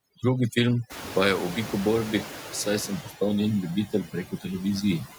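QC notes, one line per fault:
Throughout: overdone noise removal. The noise reduction is set far too strong. Bands near its noise estimate are pushed almost to silence, and quiet parts of the speech go with them. The background drops and breaks up into twinkling specks.
Throughout: noise suppressor artifacts. Every band judged to be steady noise is lowered frame by frame, by about 6 dB. The residue sinks in gaps and rises under the speech.
0.89 to 3.01 s: noise suppressor catching up. The room noise jumps by about 21 dB near 1 s. The suppressor's estimate lags, so the louder noise first passes with little reduction. It then sinks over about 2.1 s as the estimate adapts to a cut of about 6 dB.
3.87 to 4.46 s and 5.05 to 5.18 s: speech cut by the noise suppressor. The suppressor mistakes parts of the speech for noise and turns them down with the background. The drops reach about 14 dB and about 15 dB over roughly 300 ms and 150 ms. 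Those parts sound swallowed and faint.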